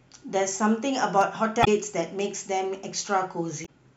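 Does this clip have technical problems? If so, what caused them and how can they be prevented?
Yes. At 1.21 to 1.24 s a single loud pop rises a few decibels above the speech, which continues beneath it, unlike a dropout. It was likely a voltage pulse from a plug, switch or static discharge. Secure connectors and ground equipment to prevent it.

At 1.61 to 1.68 s and 3.62 to 3.69 s, damaged data in a compressed stream produces short glitches, not a thump. The decoder lost sync and skipped to the next readable frame. Using checksummed transfers and stable storage prevents this.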